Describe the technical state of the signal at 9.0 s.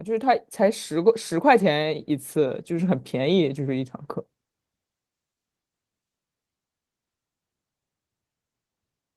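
At 9.0 s the speech is intact, with no fault in the signal beyond the light softening of detail from the Opus voice compression it passes through.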